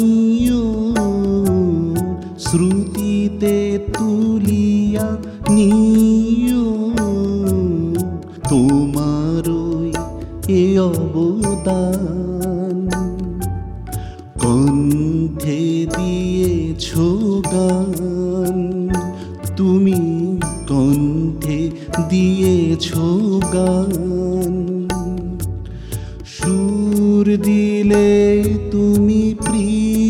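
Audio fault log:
No faults detected in this clip; nothing to log.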